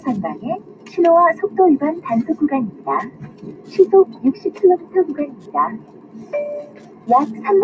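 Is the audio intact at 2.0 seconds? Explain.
No. At 2.0 seconds a faint, steady ticking runs beneath the sound about ten times a second, well down at roughly 35 dB below it. This is Wi-Fi interference, present throughout the clip. A nearby Wi-Fi radio sends a beacon every 102.4 ms, and the audio circuit rectifies those bursts and any traffic between them, so the radio's timing pattern appears in the audio.

The sound at that moment also pumps and thins. Onsets come through, but sustained parts and tails sink away, with the level swinging by around 15 dB. This is a noise suppressor applied to music or sounds, also active across the whole clip. A suppressor designed for speech treats steady tones, ambience and reverberation as noise and pulls them down, so it chops into the decay of everything it hears.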